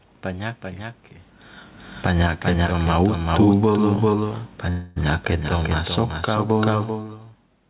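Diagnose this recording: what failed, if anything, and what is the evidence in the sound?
A second copy of the speech runs through the whole recording, about 5 dB quieter and roughly 0.4 s behind the original. It is a doubled audio track, likely from the capture or call-processing path picking the signal up twice. Each phrase gets a dry, full-band repeat with no room decay.

The call processing's automatic gain falling shows up twice. From 1.91 to 4.34 s the gain control judged the input too loud or its background noise too strong and eased it down by about 5 dB. From 5.25 to 7.18 s it pulled down again by about 3 dB. Each time the speech and its background sink together.

A call audio freeze runs from 4.70 to 4.98 s, likely a network stall that emptied the jitter buffer. The receiver filled the 260 ms with a fading continuation of the last sound rather than silence. The speech then resumes where it stopped, arriving 260 ms later with nothing lost.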